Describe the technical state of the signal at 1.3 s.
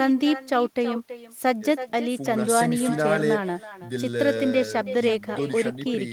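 At 1.3 s the speech is trailed by a fainter, thinner copy of itself, arriving roughly a third of a second behind and sitting about 14 dB below the direct sound. It runs through the whole clip, not just this moment. This is echo with no canceller: the far end is playing the call over a loudspeaker, its microphone captures that playback, and nothing strips it out before it returns across the network round trip.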